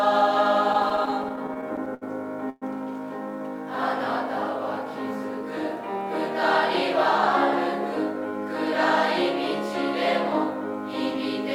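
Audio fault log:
0.73 to 2.03 s, repeated stalls (stutter): the sound keeps catching and holding, fifteen short interruptions across this stretch, the longest about 71 ms and together about 221 ms of held-over sound, roughly a sixth of the span. Packets were reaching the receiver late or slower than playback consumed them, so the jitter buffer kept draining, and each time the last sound was stretched forward until data arrived. Nothing drops out, but the audio drags and stammers.
2.49 to 2.64 s, call audio freeze: the sound briefly hangs as a fading continuation of the last moment, about 121 ms in all, ending in roughly 10 ms of silence before normal playback resumes. This is likely a single hold-up of packets in transit that emptied the jitter buffer, with the receiver filling the wait. Playback then picks up where it stopped, so the audio runs about 121 ms later from here on, with nothing lost.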